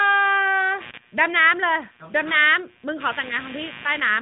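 Computer activity noise enters at 0.81 s and runs to the end: processor or peripheral load shifting the audio circuit's shared ground. It sounds like a buzzing chirp at roughly 100 pulses per second, sitting around 20 dB below the speech, beneath the light narrowband AMR coding.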